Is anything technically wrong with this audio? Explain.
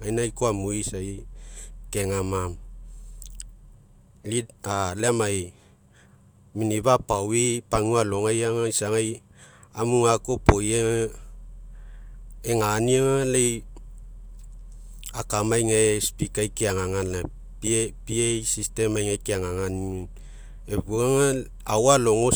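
No, nothing technically wrong here.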